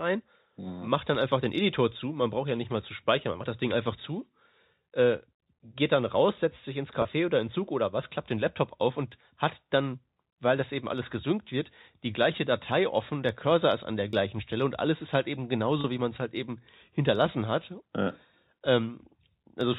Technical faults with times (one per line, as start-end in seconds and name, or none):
7.02-7.05 packet loss with pitch repetition
14.10-14.13 packet loss with pitch repetition
15.81-15.84 packet loss with pitch repetition